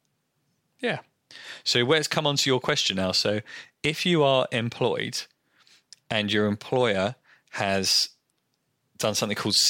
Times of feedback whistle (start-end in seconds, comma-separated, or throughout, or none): none